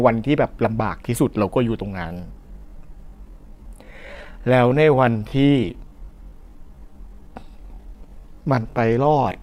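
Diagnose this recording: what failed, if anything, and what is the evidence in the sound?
From 1.89 s to the end, the speech abruptly slows to about 0.67 times its pace while the pitch holds steady, so it drags. This is a time-stretched section, likely from processing software lengthening the audio by repeating short pieces.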